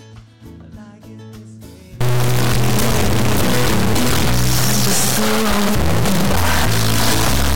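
From 2.01 s to the end, integer read as float: 32-bit integer samples read as 32-bit float turn the sound into loud buzzing, showing as a clipped square-wave waveform and broadband spectrogram smear.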